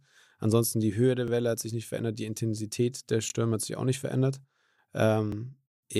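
Overlapping chunks produce three stutters at 1.28–1.30 s, 3.30–3.32 s (just before "hat sich auch nicht") and 5.32–5.35 s, spaced at the 2.0 s chunk length. Each new chunk begins before the previous one has finished, so the boundary region is played twice. Here 23.2 ms of speech repeats at every join. It is heard as a brief click or doubled fragment recurring at a regular interval.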